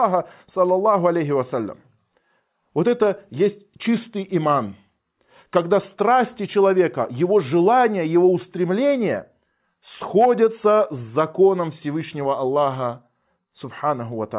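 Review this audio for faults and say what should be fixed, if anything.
No faults found; nothing needs fixing.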